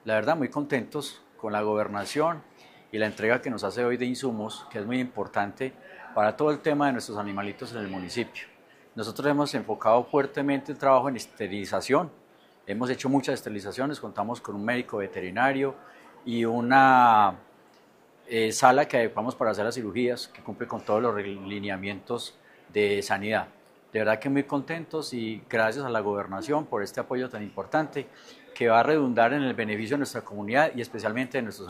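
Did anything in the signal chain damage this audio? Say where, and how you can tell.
No, no stage of the chain audibly damaged this audio.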